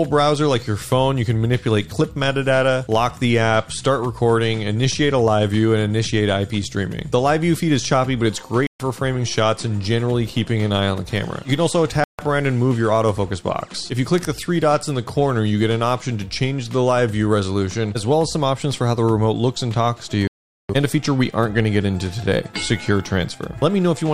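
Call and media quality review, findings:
Bluetooth stall: silent gaps at 8.67–8.80, 12.04–12.19 and 20.27–20.70 s, longest 420 ms. Likely interference draining the headphone buffer until resent packets arrive.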